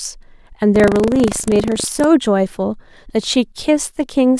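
From 0.72 to 2.05 s, buffer tearing: writer and hardware read point have slipped, splicing a small slice of audio about 70 ms old into each period, producing a 25 Hz robotic buzz.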